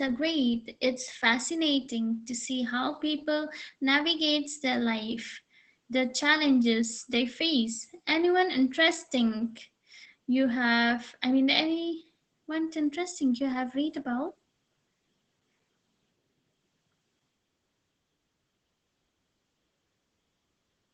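Opus voice compression runs throughout this speech, fitting SILK coding near 12 kbps: nothing above 8.5 kHz, so a spectrogram shows a flat ceiling, and the coarse excitation sounds plainly muffled, hoarse and slightly robotic.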